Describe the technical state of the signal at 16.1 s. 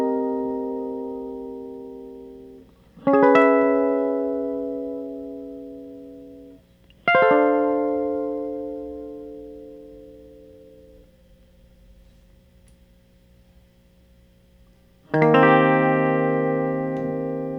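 At 16.07 s the music carries a single sharp click, most likely from dropped samples: roughly one sample is missing from the stream, so the waveform steps straight from one value to a later one with nothing in between. The gap is far too brief to take out any audible sound; only the discontinuity is heard. On a spectrogram it shows as one thin vertical line spanning the frequency range, and on the waveform as an abrupt jump.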